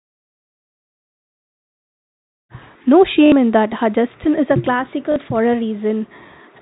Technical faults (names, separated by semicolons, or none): packet loss with last packet repeated